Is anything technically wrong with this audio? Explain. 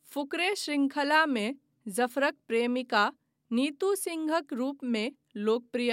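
No, nothing technically wrong stands out anywhere in this speech recording, so there's nothing here to flag.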